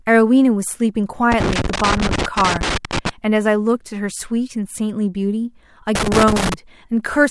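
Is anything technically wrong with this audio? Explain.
Yes. The speech carries loose connector crackle from 1.32 to 3.09 s and again from 5.95 to 6.54 s. A worn or dirty contact keeps making and breaking, chopping the signal and adding pops from any DC present, heard as irregular scratchy crackle bursts.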